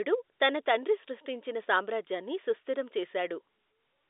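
No technical faults can be heard in this recording.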